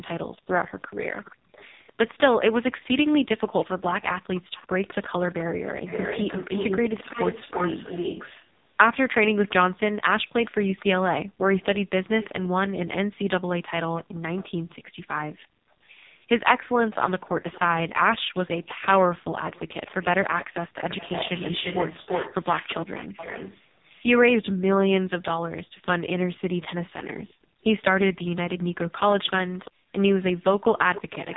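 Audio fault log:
Throughout: AMR narrowband mobile codec. The speech is cut off at about 3.8 kHz and sounds buzzy and synthetic. This codec rebuilds the voice from a vocal-tract model excited by only a few pulses per short subframe. The damage here is heavy, which fits one of its lowest modes, around 5 kbps, where too few pulses remain to carry the natural texture of the voice.
0.36–25.63 s and 27.27–31.37 s: echo leak. A delayed copy of the speech trails it by 346 ms. In the first stretch the copy is nearly as loud as the speech, about 5 dB down, and in the second it is much fainter, about 15 dB down. The likely cause is a far end playing the call on a loudspeaker whose echo canceller did not fully remove what its microphone picked up, so the leftover was sent back.
11.27–11.44 s, 14.03–15.80 s and 29.71–29.93 s: background gated by the echo canceller. The room sound drops sharply by about 37–38 dB and then returns. 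Within these spans the affected time totals roughly 150 ms, 400 ms and 200 ms. While the loudspeaker was playing, the canceller clamped the microphone hard, and the background came back once the canceller released it.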